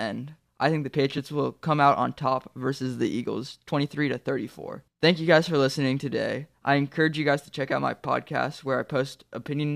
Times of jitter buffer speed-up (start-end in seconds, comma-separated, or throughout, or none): none